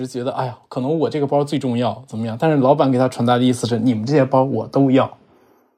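A speech recording with automatic gain rising almost the whole way through: from 0.11 s to 5.08 s, the gain control decides the input's too quiet and keeps pushing it up, about 11 dB in total, so the voice and the room noise swell together.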